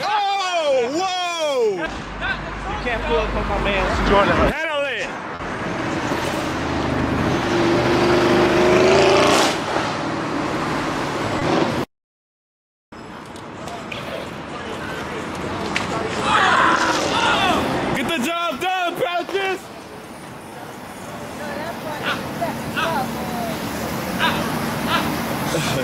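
At 5.35 to 5.41 s, 11.39 to 11.43 s and 20.49 to 20.53 s you get three bits of short concealed packet loss. Audio didn't reach the decoder in time, so the receiver patched over the holes by extending what came just before, about 40 ms for the first and 20 ms for the other two, then blended back into the real signal. Each one comes across as a quick smear or wobble.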